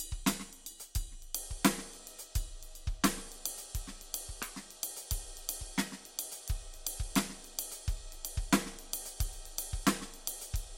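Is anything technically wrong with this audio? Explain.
No, the music signal shows no technical faults that can be heard anywhere in the recording.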